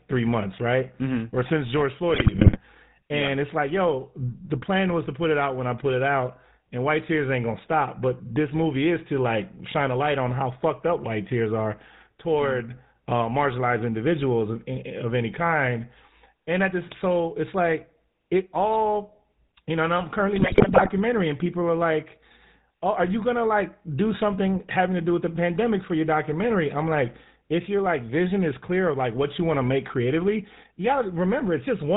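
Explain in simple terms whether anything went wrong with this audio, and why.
Two things went wrong. Throughout, the speech carries the sound of the GSM full-rate codec, an early mobile-phone coder that rebuilds the voice from a simple buzz shaped by a vocal-tract model and cuts everything above 4 kHz. That gives a steady gravelly roughness, not the watery swirl of modern low-quality coders.

Twice, from 2.14 to 2.60 seconds and from 20.38 to 20.92 seconds, GSM bit errors break in. Corrupted data scrambles the decoder's settings for a string of short frames, so the voice suddenly squawks, pops and gargles. Unlike the constant codec roughness, these are brief bursts.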